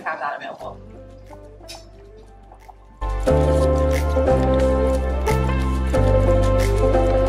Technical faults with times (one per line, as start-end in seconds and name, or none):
none